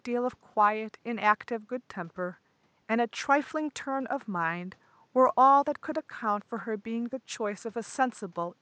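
No technical faults are audible in the speech; the only background is the room's own noise, sitting about 40 dB below the talker.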